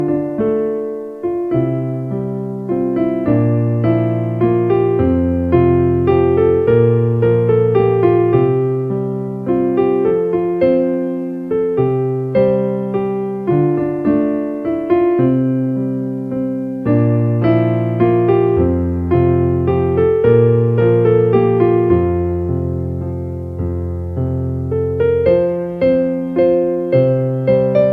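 No faults can be heard anywhere in the audio.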